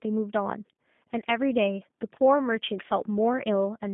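From start to finish this speech has gone through a G.729 codec, most likely the lighter G.729A variant, and the damage is plainly audible. The band is squeezed to roughly 150 Hz–3.6 kHz, so nothing bright survives up top. At what sounds like 8 kbit/s, the codec is rebuilding the sound from a vocal tract model, a pitch guess and a few pulses per frame. That's why it comes across rough, buzzy and a bit synthetic.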